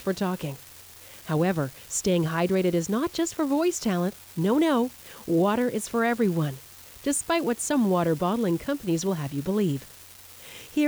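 An unreliable data bit runs throughout: one marginal line flips at random, each error a spike of about -33 dBFS, heard as a steady crackle persisting through pauses.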